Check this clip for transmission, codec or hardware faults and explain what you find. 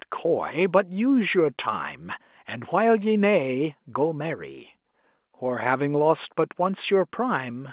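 No faults can be heard in this speech.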